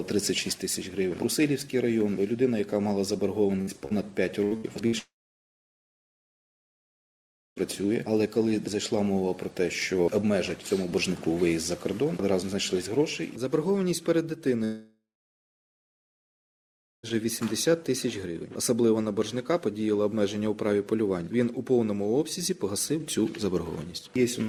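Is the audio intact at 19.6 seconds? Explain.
Yes, the audio is intact at 19.6 seconds, with no dropout, click, distortion or other fault at that point.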